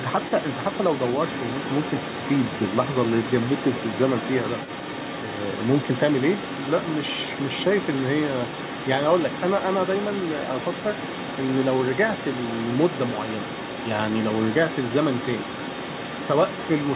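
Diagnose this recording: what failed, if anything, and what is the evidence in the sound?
Other side's voice leaking through runs from 0.0 to 17.0 s: a second voice sits about 10 dB below the speech throughout, narrowed by the call path's 4 kHz ceiling. The likely cause is the call-processing stage, where the echo canceller left the loudspeaker's playback in the microphone signal.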